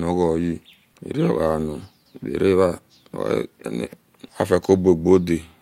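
No technical faults can be heard in this recording.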